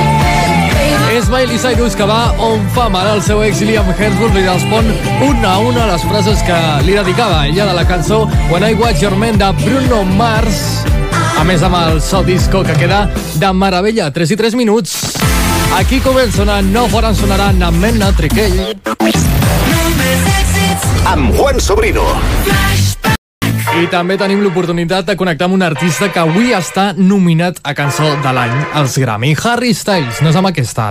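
At 23.16 s the sound stops dead in mid-flow. This is a playback stall. The output stays silent for about 265 ms, until 23.42 s, and then the sound picks up again. The gap is abrupt at both edges, with no fade in or out. It is long enough to be heard clearly as a hole. The likely cause is the player running short of data, or its playback thread being blocked, so nothing reached the output until it recovered.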